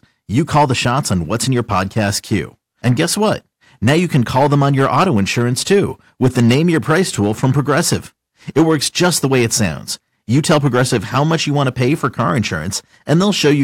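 Hard clipping runs right through this speech clip, start to finish. The level going into some stage was pushed about 8 dB past what it could pass, so the loudest peaks got sliced flat, only a small share of samples, something like a couple of percent. Those squared-off tops throw extra harmonics way up the spectrum, and you hear it as a gritty crackle riding on the louder syllables rather than a constant fuzz.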